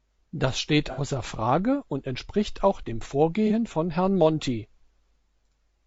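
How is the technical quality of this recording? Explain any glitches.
The speech is plainly degraded by compression throughout, with two brief dropouts patched over by the decoder.

Low-delay AAC compression: the whole clip sounds rough and grainy, with noise between harmonics and a synthetic top band, likely from AAC-ELD's short frames at a rate that fits about 32 kbps. It is constant, unlike the dropouts.

AAC frame loss with concealment: from 0.92 to 1.00 s, and again from 3.47 to 3.52 s right after "und entspricht auch dem", the decoder rebuilt about 60 ms and then about 30 ms from the last good spectrum. Each gap becomes a smeared, phasey patch rather than silence or a click.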